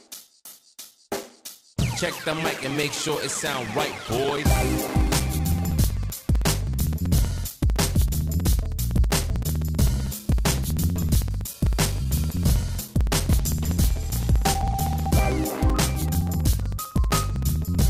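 From 0.08 s to 17.81 s, periodic USB or driver dropouts recur every 0.064 s. Each time, a few milliseconds of audio go missing and are replaced by silence, producing a steady train of ticks. Unlike random clicks or packet loss, the spacing never varies.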